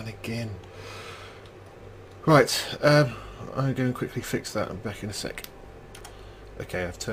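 No technical faults are audible.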